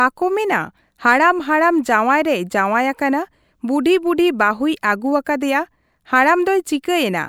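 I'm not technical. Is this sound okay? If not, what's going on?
Yes, it's fine: nothing goes wrong anywhere in this recording, so there's nothing here for you to worry about.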